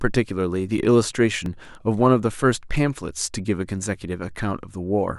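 At 1.46 s the speech jumps forward, the mark of a dropped buffer (overrun). The likely cause is that the recording software fell behind and the hardware overwrote a block of samples before they were read, so only a few milliseconds of audio are lost and the two sides are joined directly. Unlike a dropout, no silent gap is heard; the sound simply skips ahead.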